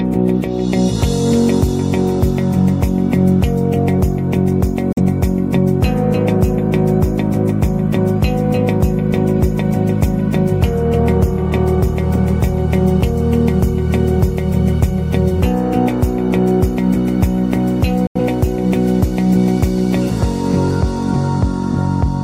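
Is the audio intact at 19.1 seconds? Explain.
Yes, the audio is intact at 19.1 seconds, with no dropout, click, distortion or other fault at that moment.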